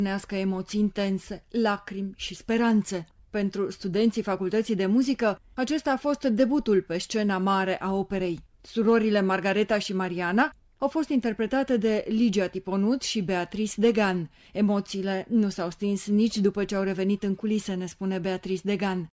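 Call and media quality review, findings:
No findings from the call and media quality review: no faults heard anywhere in the audio.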